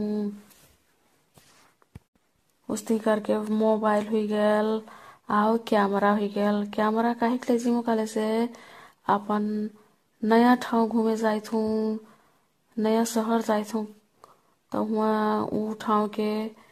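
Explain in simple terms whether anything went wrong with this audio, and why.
The speech sounds swirly, hollow and smeared throughout, with nothing above 14 kHz. That's generation loss, likely from re-encoding it around seven times.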